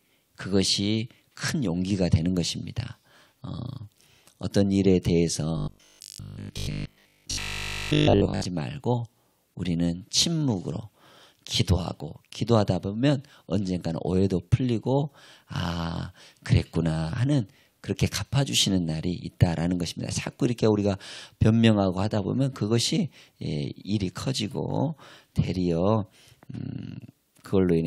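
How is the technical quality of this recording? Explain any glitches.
There's one real glitch, from about 5.57 to 8.45 s: robotic sound from repeated short buffers. The audio goes rigid and metallic, with a steady buzz at 50 Hz laid over it. That's likely because new audio wasn't arriving in time, so playback kept looping the last chunk, which fits a 20 ms buffer. For most of that stretch you're hearing repeats rather than fresh material, while the real audio in between gets skipped.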